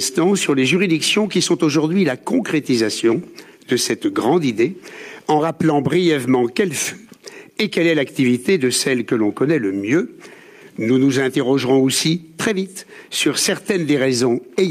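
No technical faults can be heard anywhere in the recording; the signal holds steady and continuous throughout.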